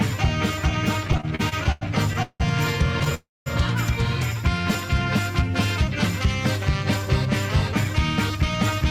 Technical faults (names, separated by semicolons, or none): repeated stalls (stutter); call audio freeze